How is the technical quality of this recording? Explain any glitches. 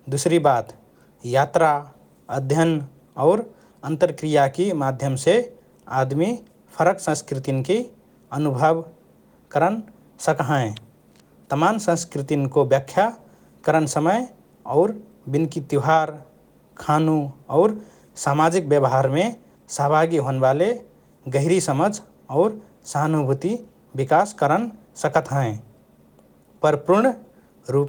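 No glitches or faults can be heard in this recording.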